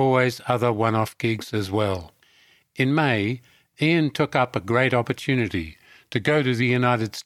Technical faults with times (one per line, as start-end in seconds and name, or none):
5.46-6.62 drift correction step